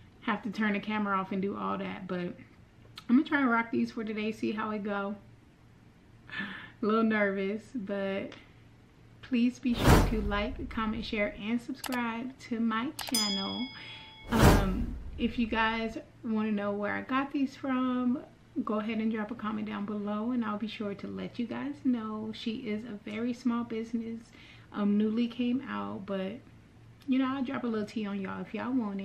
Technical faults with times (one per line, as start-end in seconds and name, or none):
none